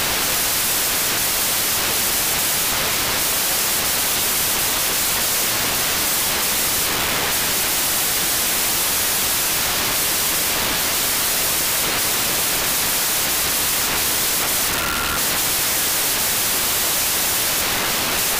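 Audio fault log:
Throughout, wrong sample width: 16-bit data read as packed 24-bit, so mismatched bytes form loud noise burying sound that plays 1.5 times fast and higher-pitched.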